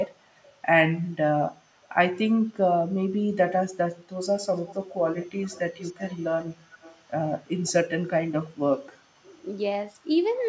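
Speech with echo leak: faint delayed copies trail the speech by 238 ms at 0.26–0.61 s and 1.82–1.89 s, then by 325 ms and louder at 4.56–4.96, 5.2–5.6, 5.78–6.26 and 6.71–7.11 s. This is likely a loudspeaker echo canceller letting residue through. On a spectrogram, each phrase's harmonics are followed by weaker ghost copies.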